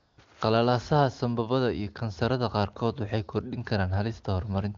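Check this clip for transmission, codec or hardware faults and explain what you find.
One fault is audible, at the very start of the speech. The sound carries the clean character of AMR wideband (HD Voice) coding at a high rate, consistent with around 23.85 kbit/s.

AMR comfort noise, 0.00 to 0.17 s: the sending phone treated the opening as silence and transmitted no speech frames for about 174 ms. The receiver filled that gap with synthetic noise built from a rough estimate of background level and spectral shape. The clip therefore opens on a smooth, steady hiss instead of the genuine room background, which then switches over to the real transmitted signal.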